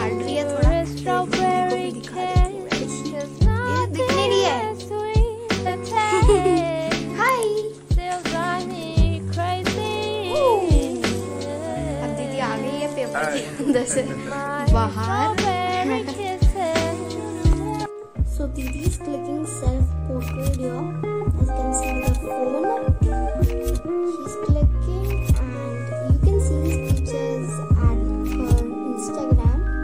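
From 0.11 s to 29.83 s there's a soft rattle of clock slip clicks, roughly every 20 ms, likely from two unsynced clocks drifting about 1000 ppm apart.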